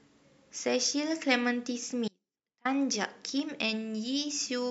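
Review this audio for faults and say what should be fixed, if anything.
There's an audio dropout to a faint residue from 2.08 to 2.65 s, so the speech vanishes abruptly for about 0.57 s and leaves only faint sound roughly 35 dB down. It's likely a brief signal loss upstream while the rest of the chain stayed live. Check cables, connectors, and wireless links before recording to catch intermittent breaks early.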